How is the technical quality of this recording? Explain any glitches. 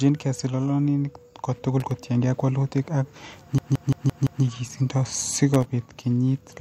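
The recording has two kinds of glitch, a loose connector crackle that happens twice and one system hang loop.

Loose connector crackle hits at 1.80 to 1.91 s, just before "kotiengei ak walutik ak", and again at 5.54 to 5.66 s. A dirty or worn contact is making and breaking, chopping the signal, so you hear a short, irregular scratchy burst each time.

The system hang loop runs from 3.58 to 4.44 s, right after "kotiengei ak walutik ak". The machine stalled while the sound hardware kept replaying its ring buffer, so a 171 ms chunk repeats five times at about 5.9 Hz, which fits an 8192-sample buffer. It comes across as a stuttering, machine-gun repeat.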